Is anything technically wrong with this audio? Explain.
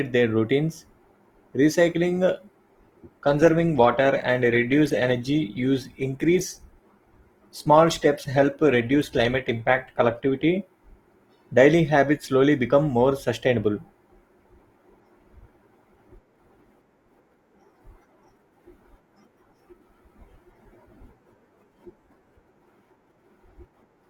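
Yes. An adaptive stream at a lower bitrate runs from 2.45 to 10.45 s, right after "recycling uh". The player switched to a leaner encoding, consistent with Opus falling from 64 to 16 kbit/s, so the speech abruptly takes on more codec artefacts, with no gap.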